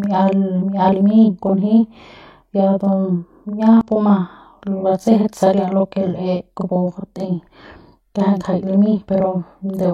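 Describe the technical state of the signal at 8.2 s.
At 8.2 s the speech carries a channel delay (doubling), present across the whole clip rather than starting there. One channel runs about 40 ms behind the other, and summing both to mono lets the late copy sound as a distinct slap at equal level, giving a doubled attack. On the waveform each onset appears twice, 40 ms apart; on a spectrogram consonant edges show as paired vertical strokes.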